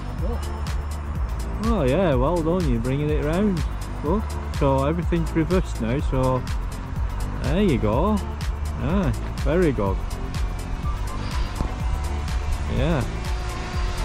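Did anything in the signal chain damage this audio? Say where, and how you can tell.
No, nothing in this audio stood out on listening as damage from any stage of the signal chain.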